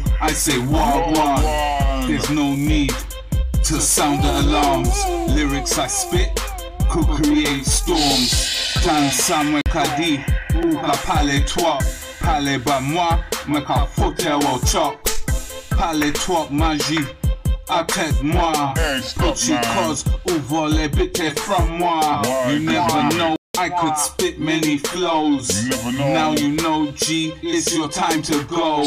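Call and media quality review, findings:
Block of digital silence at 9.61–9.66 s (46 ms) and 23.36–23.55 s (186 ms): abrupt dropout to silence. The first is heard as a short hole, the second as a longer hole. The output buffer went unfilled, which fits blocks of 2048 and 8192 samples.

Repeated buffer at 10.63 s and 22.70 s: brief click or buzz at each. A 1.45 ms slice, consistent with a 64-sample buffer, replays once, then three times, as the device reuses the last buffer when new audio arrives late.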